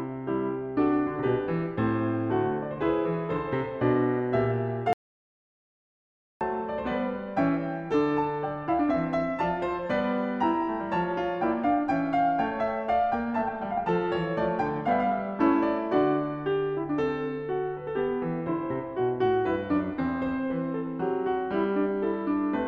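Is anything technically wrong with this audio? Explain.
Yes. The music has an audio dropout to silence from 4.93 s to 6.41 s. For about 1.5 seconds the sound stops dead and the gap is silent, with no background or room tone underneath. The music is cut off mid-flow and then resumes abruptly. This is likely a lost input, such as a disconnected device, a failed link or a stray mute, while the recorder kept writing silence. Whatever played during that stretch is gone.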